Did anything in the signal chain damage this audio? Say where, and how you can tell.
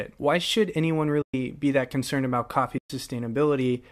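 Yes. AAC frame loss with muting, at the network and decoder stage. Sound drops into soft-edged holes at 1.22 to 1.34 s, after "should anyone", and 2.78 to 2.90 s, after "that concerned about coffee". Each gap is about 120 ms, which fits roughly twelve 10 ms frames of a likely low-delay AAC stream. The decoder zeroed the missing spectrum, and the overlapping windows faded the sound out and back in.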